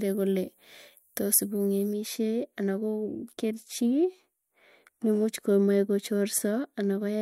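From 1.93 s to the end, a de-emphasis filter is applied wrongly: a treble cut meant to reverse a pre-emphasis boost acts on speech that either never received that boost or had already been de-emphasized, so nothing is restored and the high end is simply cut. The response falls away smoothly above the midrange, reaching about 13 dB down at 10 kHz relative to 1 kHz. From that point the speech turns dull and muffled, with consonants losing their crispness and air.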